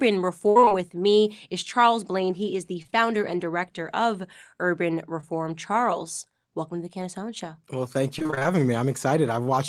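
Repeated packet loss (robotic sound) runs from 0.49 to 0.72 s, just before "with me is". Packets kept failing to arrive in time, leaving what sounds like five separate holes totalling 140 ms, the longest 59 ms. The receiver bridged each one by extending the preceding sound, so more than half of this quarter-second is synthetic, and the speech turns choppy. The same fault returns from 8.19 to 8.46 s: about seven shorter holes, none over about 23 ms, with roughly half the stretch filled in.

Between these, short concealed packet loss strikes three times in a row from 2.82 to 2.95 s, after "is the" and before "and director of". Each loss removed about 20 ms that the decoder patched by prolonging the last sound before fading back to real audio, heard as a brief smear and wobble. A single further instance follows at 5.21 s.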